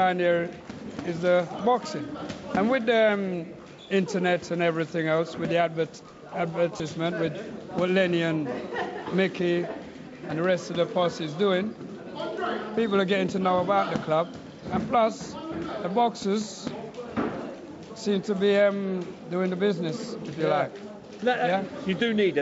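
Bluetooth LE Audio frames were lost from 6.77 to 6.80 s, a 30 ms gap that fits three lost frames. The LC3 decoder concealed it by reusing the last spectrum with random signs, so the audio there turns into a brief noisy smear. The call microphone path, with nothing above 8 kHz, is not a fault.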